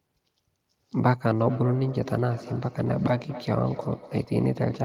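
From 1.38 s to the end, a feedback echo between two devices sets in: a second device in the same room plays back what the first microphone sent, and that microphone captures it again. Each device's echo canceller removes only its own playback, so the returning sound passes straight through. The speech comes back at roughly a fifth of a second behind itself, peaking at about 15 dB below the direct speech, like a short, trailing doubling.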